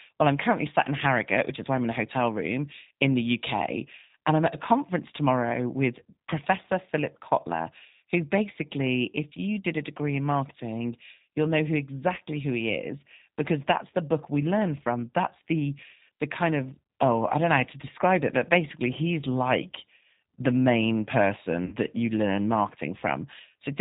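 Throughout the recording the speech sounds slightly rough and synthetic, with nothing above 4 kHz and a plainly audible coded graininess. This is the G.729 codec, here the G.729A variant, at a rate that points to 8 kbit/s. It rebuilds each 10 ms frame from a vocal tract filter, a pitch predictor and a few pulses, so fine detail and upper frequencies are lost and the result sounds machine-made.

From 21.66 to 21.76 s the speech smears into a stretched buzzy tone or coloured noise that fades, and it stays weak or distorted briefly afterward. This is VoIP packet loss concealed by the speech codec. About 60 ms of audio went missing, which fits two lost packets. The decoder filled the gap by repeating its last pitch and filter settings at falling gain, and because each frame depends on the previous one, recovery lags behind the returning packets.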